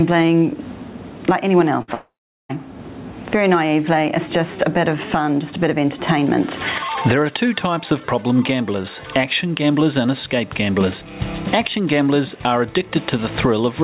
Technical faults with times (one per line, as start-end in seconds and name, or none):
0.00-13.84 gain pumping
1.82-1.90 burst of packet loss
1.94-2.51 long network dropout